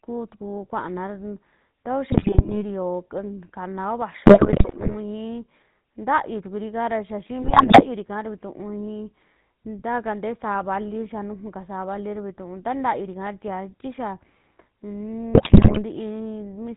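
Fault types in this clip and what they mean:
GSM full-rate codec: the whole speech clip has that buzzy, gravelly GSM roughness, plainly audible, with nothing coming through above 4 kHz, consistent with a 13 kbps full-rate link.
GSM bit errors: corrupted frames reach the decoder, so the speech squawks, pops and gargles in four bursts, around 2.1, 4.3 (just before "ii ntayuu"), 7.4 and 15.3 s.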